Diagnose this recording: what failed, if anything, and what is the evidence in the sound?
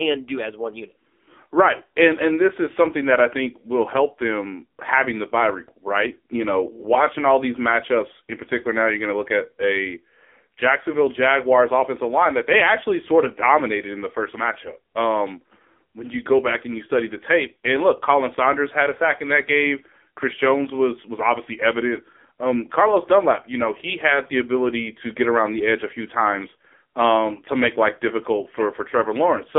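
Codec stage: the speech runs through the AMR narrowband mobile codec throughout. Nothing above 3.6 kHz survives, the band spans 250 Hz to 3.5 kHz, and the heavy buzzy, synthetic texture of its pulse-excited vocal-tract model fits a low mode around 6.7 kbps.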